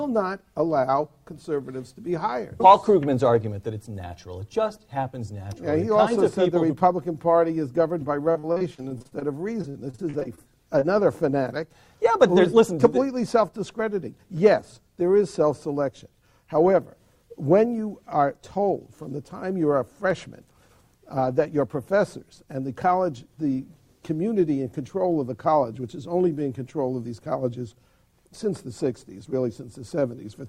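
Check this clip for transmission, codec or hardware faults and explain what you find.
Three transmission faults are audible, all from late or lost packets and their handling at the receiver.

Repeated packet loss (robotic sound) runs from 8.31 to 9.23 s and again from 9.62 to 10.39 s. Frequent holes, none longer than about 43 ms, are each patched by extending the preceding sound, so roughly a third of the first stretch and about a quarter of the second is synthetic. The result is a choppy texture with pieces missing, not one isolated blip.

Short concealed packet loss occurs at 10.79 s, a single 20 ms hole filled by continuing the last sound and blending back. It is a brief smear or wobble. Because it is one event, it lacks the sustained robotic chop of the earlier stretches.

A jitter buffer speed-up spans 20.06 to 20.69 s. The receiver trimmed short pitch-period pieces, roughly 40 ms in total, to reduce built-up delay. 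Playback runs about 6% fast at unchanged pitch, so the sound feels hurried rather than gapped or higher.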